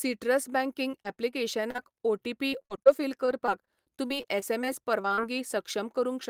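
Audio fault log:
0.91–1.35 s, repeated packet loss (robotic sound): four short holes, none longer than 20 ms, about 80 ms missing in total. Each one gets patched by stretching the last bit of sound, so this stretch comes across choppy.
1.71–1.80 s, short concealed packet loss: two back-to-back drops, 40 ms then 20 ms, filled by continuing the preceding sound and blending back in. You hear a quick smear or wobble, and a brief consonant could get swallowed.
2.50–4.66 s, repeated packet loss (robotic sound): the worst run, with 17 gaps, the longest about 40 ms, adding up to roughly 340 ms lost. All that repeated patching across two seconds gives a choppy, broken-up texture with chunks missing.
5.02–5.19 s, short concealed packet loss: three quick holes at 5.02, 5.08 and 5.14 s, 20 to 40 ms each, every one papered over by extending the prior sound. It comes out as a little cluster of quick smears.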